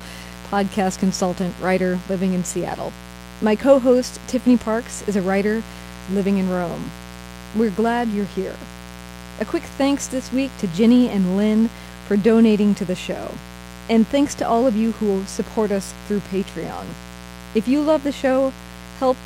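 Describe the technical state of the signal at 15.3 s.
At 15.3 s there's a mains buzz under the speech, as everywhere else in the recording. Spiky interference repeating twice per 60 Hz cycle spreads harmonics up into the kilohertz range, giving a steady, raspy buzz sitting roughly 20 dB below the speech.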